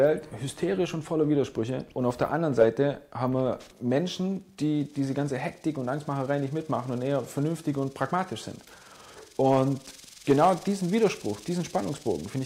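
From 0.13 s to the end, a soft, steady rattle runs under the sound, made of faint ticks roughly every 30 ms. Hundreds of them pile up, clearest where the sound is loud and sustained. These are clock slip clicks, likely from two devices running on separate, unsynchronised clocks. A mismatch of around 700 ppm builds to a whole sample about every 30 ms, so a single sample is dropped or repeated each time, leaving a tiny step in the waveform.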